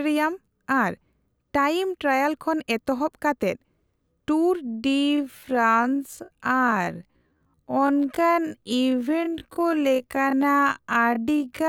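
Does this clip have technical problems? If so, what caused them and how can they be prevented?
Yes. From 4.61 s to the end, the speech has a time-stretched section. The pace suddenly drops to about half speed, 0.505 times the original, while the pitch stays where it was. Syllables sound drawn out and dragging. This likely comes from software that lengthened the audio to fill a set duration and held the pitch steady by repeating short slices of the waveform. To prevent it, avoid forcing audio to fit a length, or cap the stretch at a few percent.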